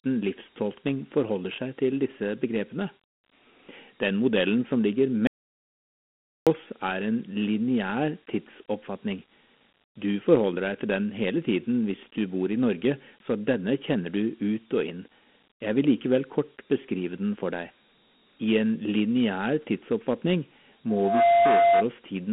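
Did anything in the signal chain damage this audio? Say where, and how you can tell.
Yes. At the codec stage, Dialogic VOX ADPCM: the band runs 200 Hz to 3.4 kHz, nothing above 3.8 kHz, with gritty hiss trailing the speech, which fits 4-bit coding at 8,000 samples a second.

An audio dropout to silence runs from 5.27 to 6.47 s, right after "modellen som ligger". It is 1.2 s of silence with no room tone, likely from input lost upstream of the recorder.

A loudspeaker feedback squeal follows "I en lineær tidsoppfatning" from 20.89 to 21.86 s. A 688 Hz tone swells over about a third of a second to about 5 dB above the speech, from an acoustic mic-speaker loop.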